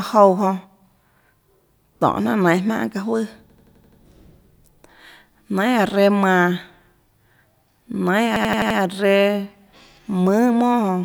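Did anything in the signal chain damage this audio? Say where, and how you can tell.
Yes. The damage happens at the driver or buffer stage, where a system hang loop occurs twice: from 3.50 to 4.01 s and from 8.36 to 8.79 s. In each, the same 85 ms slice of speech repeats exactly, six times and then five, giving a machine-gun stutter at 11.7 Hz. The period fits a 4096-sample ring buffer that the hardware kept replaying while the driver froze. On a waveform, identical blocks sit side by side. On a spectrogram, they appear as copied tiles split by vertical seams.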